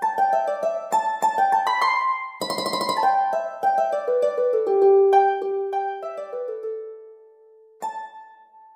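From 5.10 to 5.74 s, zipper noise rides on a level drop of about 10 dB. The gain falls in coarse, unsmoothed steps, around fifty per second, and each jump leaves a small click, heard as a rapid ticking buzz while the level moves.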